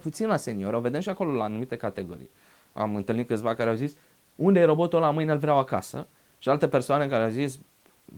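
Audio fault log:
No faults heard in this speech recording.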